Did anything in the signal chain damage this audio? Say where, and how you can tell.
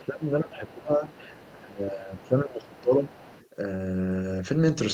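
Yes, in call processing. Speech is suppressed in double talk from 0.0 to 1.09 s and 1.53 to 3.08 s. The talker dips by roughly 15 and then 20 dB. The likely cause is an echo canceller that could not separate near speech from loudspeaker echo, so it attenuated both.

The other side's voice is leaking through at 0.03–0.21, 0.67–0.75, 1.08–1.53, 2.72–2.81 and 3.06–3.48 s. It sits roughly 25 to 35 dB below the speech. It is likely residual loudspeaker echo the canceller failed to remove from the microphone.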